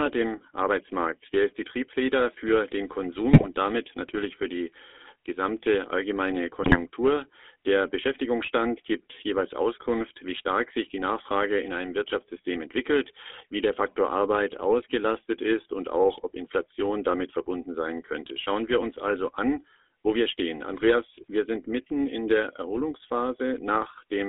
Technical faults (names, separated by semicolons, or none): GSM full-rate codec; GSM bit errors